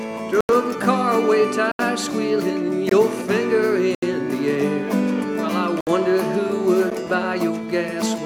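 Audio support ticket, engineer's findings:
Block of digital silence, six dropouts: output buffer not filled in time, samples zeroed. Hard cuts to silence, no fade. 0.41–0.49 s (85 ms, fits a 4096-sample buffer), 1.72–1.79 s, 2.89–2.91 s (21 ms, 1024 samples), 3.95–4.02 s, 5.81–5.87 s, tick at 6.90 s.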